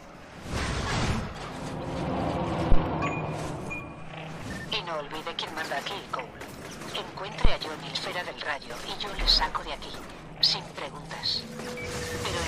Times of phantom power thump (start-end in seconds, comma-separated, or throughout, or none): 2.72-2.81, 7.45-7.56